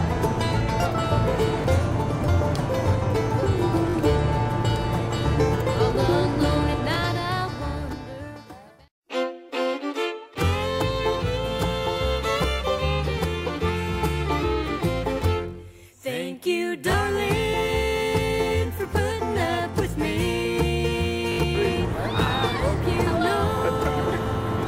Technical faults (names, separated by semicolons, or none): repeated buffer